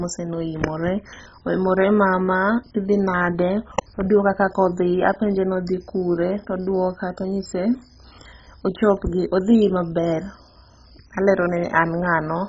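Throughout the speech, the signal has likely passed through MP2 compression at a starved bitrate, one that fits something as low as 16 kbps. With so few bits to share among its sub-bands, the coder shuts off the upper bands entirely, leaving nothing above 7.5 kHz, and quantises the remaining bands very coarsely. The result is a dull, muffled tone with heavy gurgling, granular distortion as bands flicker in and out.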